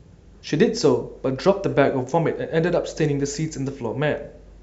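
No technical faults can be heard in this recording.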